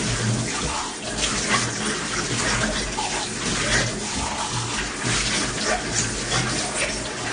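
It's a recording of sounds, and the whole thing carries what's most likely AAC compression at a low rate. Nothing comes through above about 9.6 kHz, so the top end is simply gone and the sound feels dull. The codec damage is plainly audible: a smeared, watery texture where the encoder ran short of bits. That's consistent with an AAC-LC encode at something around 32 kbps.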